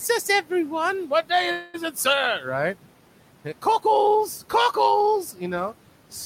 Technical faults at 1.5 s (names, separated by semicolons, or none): call audio freeze